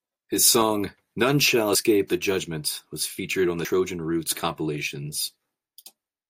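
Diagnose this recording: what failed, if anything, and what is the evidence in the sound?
At 3.65 s the speech skips ahead. Roughly a tenth of a second is gone, and the two sides join with no silence. This is audio missing between chunks, likely a driver or buffer stage dropping samples while handing over between 2-second blocks.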